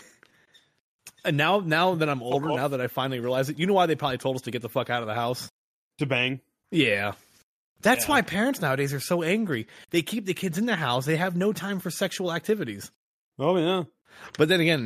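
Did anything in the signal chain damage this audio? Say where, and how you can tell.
No, nothing in the signal chain has left an audible mark on this speech recording. I can't point to any stage, from capture through to playback, where the audio was damaged.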